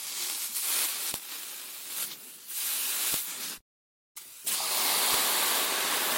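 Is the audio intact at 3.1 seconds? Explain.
No. At 3.14 s, a file header played as audio: one piece was joined on without its WAV header being stripped, so those few dozen header bytes were read as samples. The result is a single sharp, loud click at the junction, unrelated to the surrounding sound.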